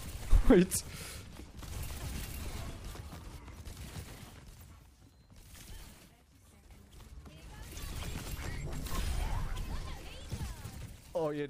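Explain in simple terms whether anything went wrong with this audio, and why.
The volume was changed in a few coarse jumps instead of a smooth glide, causing zipper noise: quick ticking as the sound drops from 3.49 to 4.93 s, rises from 6.33 to 7.67 s, and drops faster, with denser ticks, from 10.28 s to the end.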